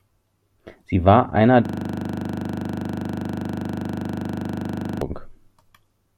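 Speech, and from 1.65 s to 5.02 s it locks up in a classic system hang loop. The driver or machine froze while the audio hardware kept replaying the same ring buffer. You get one 40 ms slice repeated exactly, about 84 times, which comes across as a coarse rattling buzz at 25 Hz instead of speech. That loop length fits a playback buffer of roughly 40 ms being cycled with nothing new written into it.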